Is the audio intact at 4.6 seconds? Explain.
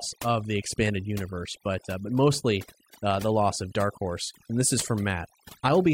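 No. At 4.6 seconds, as across the whole clip, the speech carries overdone noise removal. The noise reduction was pushed so hard that any frequency band close to its noise estimate gets cut to nothing, and the softer parts of the voice are cut along with it. Between phrases the background drops to near silence, broken by twinkling specks. A spectrogram shows dark, empty gaps with scattered isolated bright dots.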